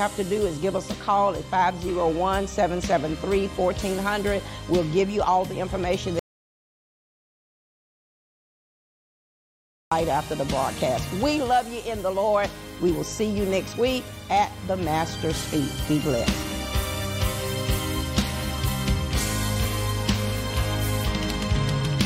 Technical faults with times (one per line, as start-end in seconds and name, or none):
6.19-9.91 audio dropout to silence